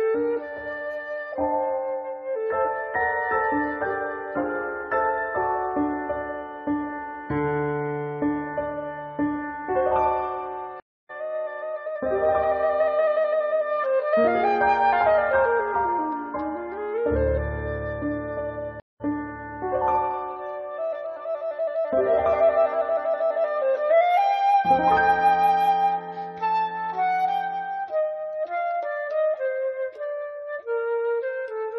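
Stream reconnects at 10.80 s and 18.80 s: the connection dropped, the player fell silent for 291 ms and then 198 ms, rejoined the stream and started a new decoder partway through. Because the stream kept running during each gap, the sound picks up at a later point, skipping ahead by roughly 300 ms the first time and roughly 150 ms the second. Each restart opens with a brief muted or faded-in moment.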